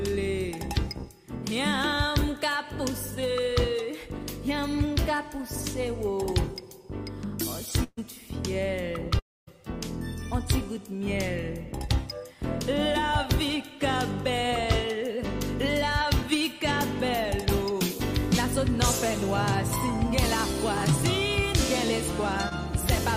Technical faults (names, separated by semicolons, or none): burst of packet loss; long network dropout; short concealed packet loss